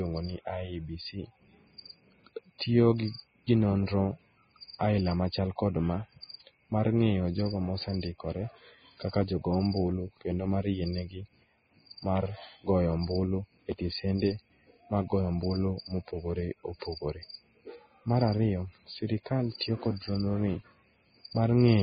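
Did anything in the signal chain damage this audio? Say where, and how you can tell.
Yes, at the codec stage. Throughout the speech nothing survives above 4.9 kHz, and the remaining treble is hissy and grainy with blurred consonant attacks, likely from heavy Vorbis compression near 15 kbps. A spectrogram shows a flat ceiling at 4.9 kHz with blotchy, noise-filled upper bands.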